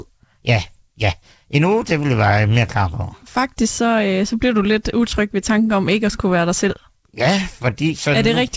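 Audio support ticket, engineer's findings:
No faults found in the speech recording. The call path is working normally: content tops out at 7 kHz, consistent with a wideband G.722 link, with the usual codec coding noise underneath.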